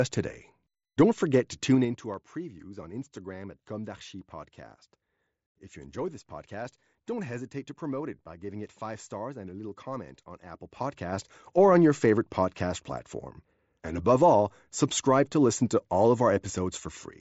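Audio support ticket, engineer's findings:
Zipper noise, 1.7–2.14 s (level down about 15 dB, roughly ten ticks/s) and 10.5–11.3 s (up about 15 dB, roughly five/s). Gain stage stepping 3 dB at a time without smoothing. Unlike codec clicks, ticking occurs only while level moves. Bandwidth ends near 7.7 kHz, consistent with the mSBC headset link.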